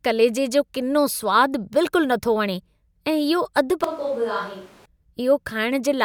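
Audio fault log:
3.84 to 4.86 s, switch to a distant microphone: the speech abruptly turns roomy and hollow, thinner in the bass and roughly 10 dB quieter, with room noise rising to about 25 dB below the speech. The likely cause is the close microphone dropping out, leaving a farther pickup.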